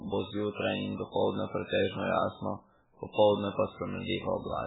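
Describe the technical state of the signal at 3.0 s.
At 3.0 s the speech shows the same damage it carries throughout: nothing is left above about 3.8 kHz, and the remaining band sounds watery and swirly, with consonant attacks smeared. The likely cause is heavy MP3 compression at a bitrate that points to around 8 kbps. With so few bits, the encoder discards the treble outright and drops weak frequency lines that flicker on and off between frames. That flicker separates it from a simple low-pass filter, which would sound dull but steady.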